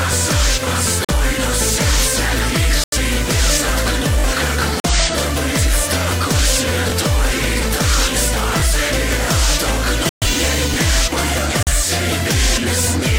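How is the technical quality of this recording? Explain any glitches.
The recording is marred by two recurring playback faults: repeated dropouts to silence and a few brief stutters.

Corrupt frame muted, at 1.05 to 1.13 s, 2.84 to 2.97 s, 4.80 to 4.90 s, 10.09 to 10.27 s and 11.63 to 11.72 s: damaged bits in the compressed stream made the decoder reject whole frames, and the player substituted silence. Each one is an abrupt hole in the sound, from roughly 90 ms to 180 ms long. The longest, near 10.1 s, fits several consecutive frames being lost. Timing stays intact afterwards.

Repeated buffer, at 4.20 to 4.24 s, 6.90 to 6.92 s, 8.60 to 8.62 s and 10.74 to 10.76 s: fresh audio reached the output device late, so it replayed the last block, which fits a 20 ms buffer. Each replay joins hard to the next, giving a quick click or buzzy stutter. At 4.20 s the piece sounds three times in total, so a few tens of milliseconds of real audio are skipped there. 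The other three events lose about 20 ms each.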